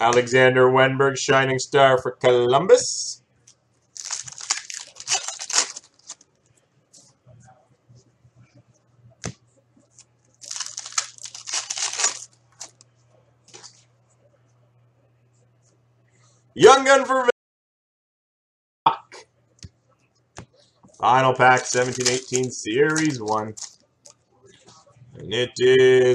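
At 17.31 s the audio cuts out abruptly, mid-flow. What follows is an audio dropout to silence lasting about 1.55 s, until 18.86 s. The gap is silent, with no room tone or noise floor underneath. The input was likely lost for that stretch, so the recorder kept writing silence. When the sound returns, it comes back just as suddenly. Whatever happened during that interval is gone.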